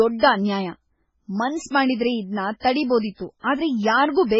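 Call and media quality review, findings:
Speech band dull for the whole clip. Nothing above 7.7 kHz. Watery, swirling texture on sibilants. Likely MP3 compression at heavy damage, consistent with a bitrate near 16 kbps. Encoder short of bits, so treble is dropped and weak spectral lines flicker frame to frame.

Pre-echo at 2.59 to 2.63 s, right after "ಮಾಡಿದ್ರೆ ಇದ್ನ". Brief hiss of about 39 ms ahead of a sharp onset, which sounds softened. Same MP3 block coding. Quantisation noise sized for the attack is spread across the quiet part of the block before it.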